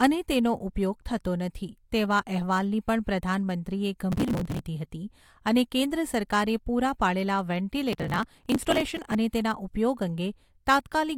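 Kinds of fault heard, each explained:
processor overload crackle: missed processing deadlines skip many tiny buffers, tearing the speech into gritty bursts; the waveform shows hard-edged gaps, and the spectrogram shows broadband vertical streaks.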